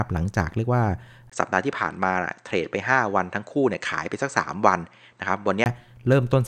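At 1.30 s, after a 20 ms gap, the speech turns duller, with nothing above 8.6 kHz, a faint new background hiss and no real change in level, until 5.66 s. The input was likely switched to a poorer device, a narrower-band microphone path.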